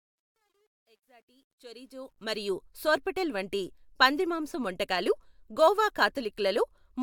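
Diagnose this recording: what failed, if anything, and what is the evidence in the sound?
Truncation distortion on the fade-in from 0.0 to 2.51 s: the quiet start turns gritty, worst up to 1.72 s. A gain or sample-format conversion stage is dropping bits without dither, which fits roughly 11-bit resolution, so low levels collapse into coarse square steps.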